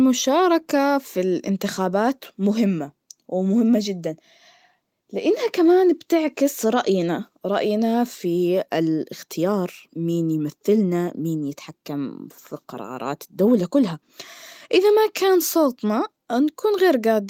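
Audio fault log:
No faults found in the speech.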